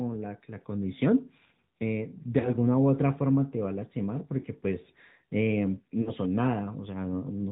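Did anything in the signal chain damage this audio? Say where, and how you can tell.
Yes. The codec stage damaged it. Nothing passes above 4 kHz. The speech sounds buzzy and synthetic throughout. That is the AMR narrowband mobile codec. A pulse-driven vocal-tract model rebuilds the voice from few bits, and the damage fits a rate near 10.2 kbps.

The radio or network stage also lost AMR speech frames. Brief dips and warbles occur at 2.40 to 2.51 s, 4.40 to 4.46 s, and 6.02 to 6.13 s. Each fits about 40 ms of missing audio. The decoder repeated its last pitch and vocal-tract settings at falling gain.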